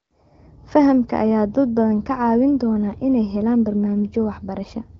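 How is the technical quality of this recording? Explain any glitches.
The technical quality holds up with no glitches to explain; the speech comes through AMR wideband (HD Voice) coding at 15.85 kbit/s, with nothing above 7.5 kHz.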